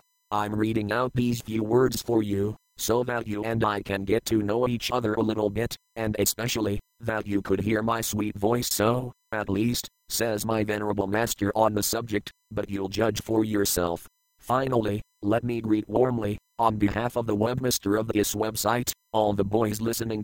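From start to finish a USB whine sits under the sound: a steady, fixed-pitch tone built on 1 kHz, with its strongest component up at the 21 kHz multiple, roughly 45 dB below the program. The bus's 1 ms frame timing is leaking current through the shared power or ground path. Mains hum would instead sit at 50 or 60 Hz and their harmonics, and a tone locked to the 1 kHz frame rate points to the USB link.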